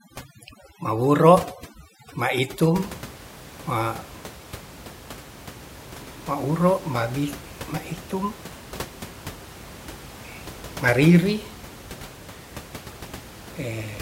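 From the start to 2.80 s, overdone noise removal strips bands near the noise estimate, leaving near-silent gaps with twinkling specks. A spectrogram shows ragged, holed-out patches and scattered isolated dots; after that, room noise about 18 dB below the speech returns.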